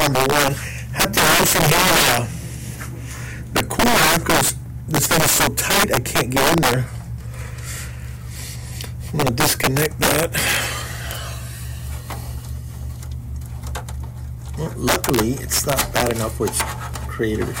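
Integer overflow turns up eight times: 0.01–0.48 s, 1.00–2.17 s, 3.57–4.49 s, 4.95–6.74 s, 9.20–10.57 s, a lone crack at 11.11 s, 14.88–16.11 s and 16.48–16.61 s. Peaks driven roughly 3 to 12 dB past the integer ceiling wrap to the opposite sign instead of being limited, so every loud moment snaps into a violent, sharp crack, nastier than clipping. It's harshest in the 1.00 s and 14.88 s stretches.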